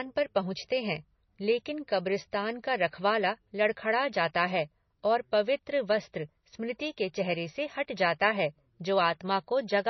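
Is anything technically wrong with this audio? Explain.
Yes. Throughout the speech the sound is watery and swirly, with smeared consonant onsets and nothing above 5.9 kHz. This is likely heavy MP3 compression, consistent with a rate around 24 kbps, where the encoder cuts the treble and lets weak frequency lines flicker between frames.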